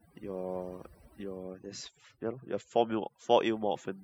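Throughout the speech, overdone noise removal leaves the background near silent with twinkling specks. The suppressor pulls bands near its noise estimate down hard, taking quiet speech detail with them. A spectrogram shows scattered isolated dots and ragged, gappy harmonics.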